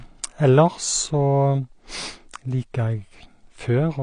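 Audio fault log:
Throughout: AAC compression. The speech is dull and smeared, with nothing above 9.9 kHz and a plainly audible warbling, fizzy texture on sibilants and held sounds. The likely cause is an AAC-LC encoder starved of bits, consistent with a rate around 32 kbps, lowering its cut-off and quantising away detail frame by frame. Unlike a simple low-pass filter, which only darkens the sound, this also adds swirling artefacts within the remaining band.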